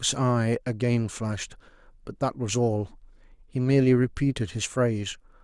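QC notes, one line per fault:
Nothing to flag here; the speech comes across without any problems worth noting.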